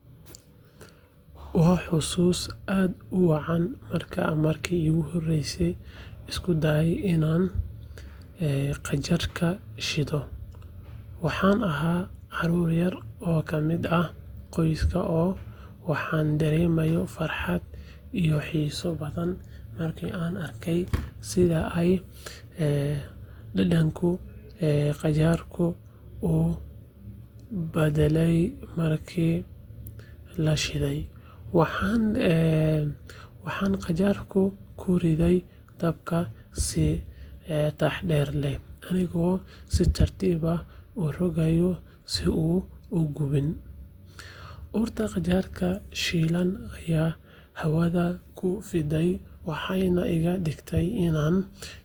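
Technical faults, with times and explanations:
throughout, generation loss: the speech sounds swirly, smeared and hollow, with blurred attacks. Likely repeated Opus encoding, around five passes, fitting roughly 64 kbit/s.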